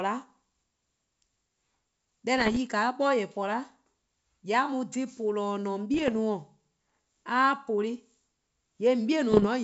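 Speech carried over a G.722 wideband link, marred by bit errors on an ADPCM link at 2.38–2.57, 5.94–6.13 and 9.32–9.46 s. Each burst pops and rasps as the corrupted step size rings on. It shows as broadband vertical streaks and jagged level jumps in the waveform.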